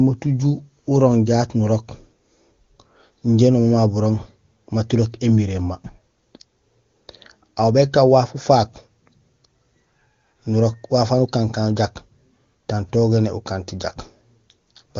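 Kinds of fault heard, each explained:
Nothing in this speech recording stood out as a problem when listening through it.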